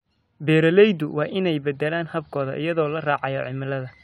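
No technical faults are audible.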